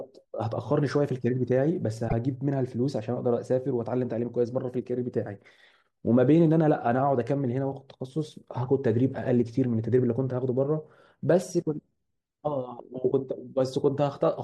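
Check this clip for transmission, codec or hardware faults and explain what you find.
One codec fault is present: damaged data in a compressed stream, from 2.05 to 2.13 s. A stretch of the compressed speech data was corrupted, so the decoder misread those frames and lost sync while hunting for the next valid frame header. For about 76 ms, the speech gives way to a short chirp, squawk, click or hole.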